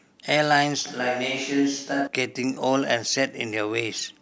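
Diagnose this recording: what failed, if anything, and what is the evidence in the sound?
From 0.87 s to 2.07 s the speech turns abruptly roomy and hollow, thinner in the bass, with room noise rising to roughly 35 dB below the speech while overall level barely moves. This is a likely switch to a distant microphone at the capture stage. The sudden change both ways, with extra room sound rather than filtering alone, sets it apart from an EQ or low-pass fault.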